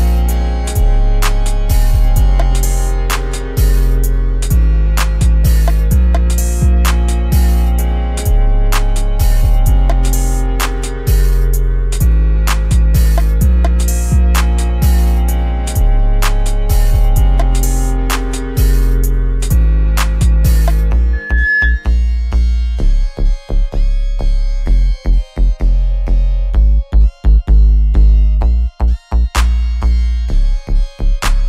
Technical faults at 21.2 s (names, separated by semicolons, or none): loudspeaker feedback squeal